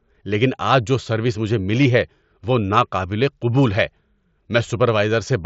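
From 1.83 to 1.85 s, between "جو سروس مجھے" and "ہے وہ ناقابل قبول", concealed Bluetooth headset packet loss: about 22 ms of audio was lost, which fits three headset packets. The gap was filled with recent waveform, leaving a brief buzzy hold and a slight warble.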